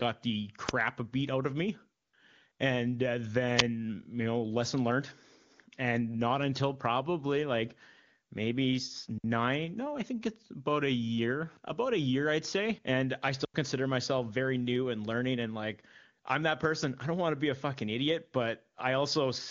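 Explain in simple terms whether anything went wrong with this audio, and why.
Two sharp bursts of digital noise, at 0.69 s and 3.6 s, are an uninitialised buffer fault: the playback system sent out blocks of memory before any sound had been written into them, so leftover data played as a loud crackle lasting about 5 ms and 10 ms.

At 2.01 to 2.13 s and 2.51 to 2.59 s you hear AMR comfort noise. The phone decided nobody was talking and stopped sending sound for 120 ms and then 80 ms. The receiving end filled each gap with a smooth, artificial hiss in place of the real background.

Two clean holes of near silence, at 9.18 to 9.24 s and 13.45 to 13.54 s, are a digital wireless dropout. The radio link lost too much data, so the receiver briefly muted, for 60 ms and about 93 ms, with no click or noise around the gap. The speech itself travels through the AMR wideband (HD Voice) codec, and that coding adds no more than faint damage.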